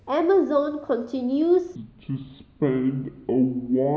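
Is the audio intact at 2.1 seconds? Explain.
No. At 2.1 seconds the speech sits inside a section at the wrong speed, running from 1.76 s to the end. It plays at 0.587 times its recorded rate. The voice drops roughly ten semitones and drags, deep and slow. It was likely played against the wrong clock.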